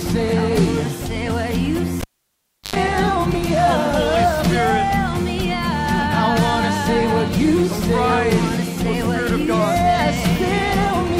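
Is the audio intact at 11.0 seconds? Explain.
Yes, at 11.0 seconds the audio is intact, with no dropout, click, distortion or other technical fault at that moment.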